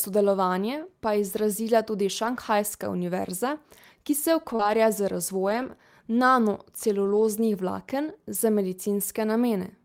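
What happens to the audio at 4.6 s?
Right after "ki se", a short concealed packet loss runs from 4.55 to 4.61 s. About 40 ms never arrived, and the receiver extended the preceding sound to cover it, giving a brief smear or wobble rather than silence. Overlapping it, from 4.59 to 4.69 s, comes a lost packet rebuilt from error correction. About 60 ms was replayed from low-bitrate backup copies, which suggests around three lost packets. That stretch continues without a gap but sounds rougher and noisier. The concealed part is a guess extrapolated from the previous sound, while the rebuilt part is degraded real audio.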